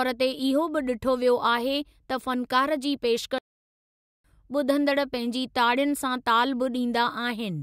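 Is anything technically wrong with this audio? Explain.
Yes. There is a playback stall in this speech clip. From 3.38 s to 4.24 s the output drops to silence for about 0.86 s, cutting the speech off mid-flow. The speech resumes at 4.24 s. The likely cause is the player running short of buffered data, or its playback thread being blocked, so it had nothing to send to the output until it recovered.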